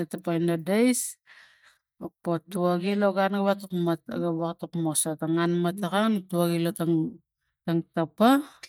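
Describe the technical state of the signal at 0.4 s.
At 0.4 s the speech signal is intact, with no dropout, clipping, glitch or other fault at that point.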